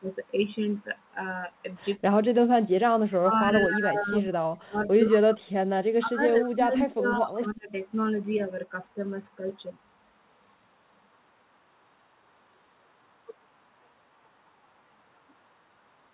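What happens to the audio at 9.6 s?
Nothing goes wrong at 9.6 s: the speech carries on intact there, limited only by the narrow call-path band that stops at about 4 kHz.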